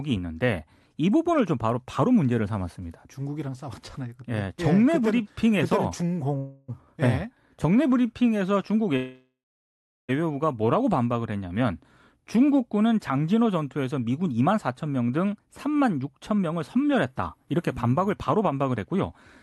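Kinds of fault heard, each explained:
Call audio freeze: packets were likely held up and the jitter buffer ran dry, so the last sound trails off as a fading buzz or hiss, once briefly and once into long silence.
Short stall from a late packet: one packet missed its slot, so the receiver stretched the preceding sound by 16 ms, a tiny hold with a faint buzz or dip.
Jitter buffer speed-up: a backlog built up, so the receiver trimmed pitch periods repeatedly, and the final stretch of speech runs about 9% fast at unchanged pitch, sounding hurried.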